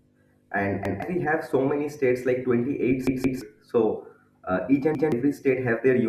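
At 0.85 to 1.02 s, 3.07 to 3.41 s and 4.95 to 5.12 s the speech stutters from a repeated buffer. Fresh audio arrived late, so the device replayed its last 171 ms block, which fits an 8192-sample buffer. The block sounds twice at the first and third points and three times at the second, skipping about 150 ms and then about 300 ms of speech. Unlike a dropout, there is no gap of silence. Instead an identical fragment loops with a hard join at each repeat.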